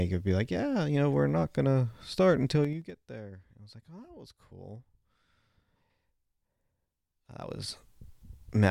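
Zipper noise at 2.56–2.99 s, after "not gonna start", and at 7.25–7.77 s: the level drops, then rises, about 20 dB in unsmoothed 4 dB and 3 dB steps, roughly ten per second. Unlike a smooth fade, each jump ticks audibly.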